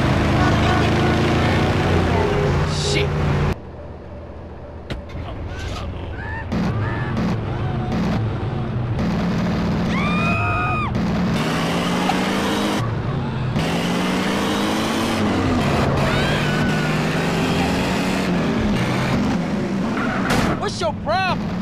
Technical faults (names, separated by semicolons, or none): damaged data in a compressed stream